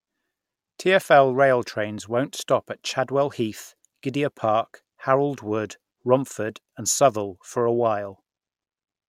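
No technical faults are audible.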